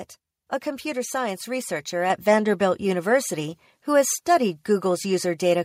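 At 2.1 s, right after "a computer science researcher", the whole sound jumps up in level at once, by about 5 dB, with the speech and the room noise behind it getting louder together and staying there. This is the microphone volume stepped up: the call software judged the input too quiet and raised the device's input volume in a single step, so everything captured after that moment comes through louder.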